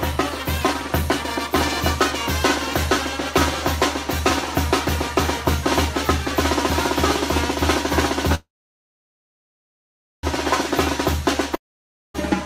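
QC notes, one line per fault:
8.35–10.26 s, call audio freeze: the sound stalls and the last fragment carries on briefly as a fading buzz, then about 1.77 s of silence follows before the audio picks up exactly where it stopped. Nothing is lost; instead a gap of about 1.9 s is inserted and everything after it runs that much later. This is likely packets held up in transit until the jitter buffer ran dry, with the receiver padding the wait.
11.55–12.17 s, long network dropout: the audio cuts away and the final fragment decays as a short hiss into about 0.56 s of silence. When sound returns it has skipped ahead, so roughly 0.6 s of material is simply gone rather than delayed. This likely reflects packets that never arrived in time to be played, with the receiver concealing the hole briefly before giving up and leaving silence.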